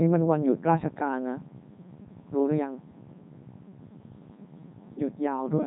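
From start to finish the speech sounds robotic and buzzy, with nothing above 3.8 kHz, the heavy damage of a Codec 2 vocoder, at what sounds like its 3.2 kbit/s mode. Only pitch, voicing, energy and spectral shape survive, and the decoder rebuilds speech from sine waves.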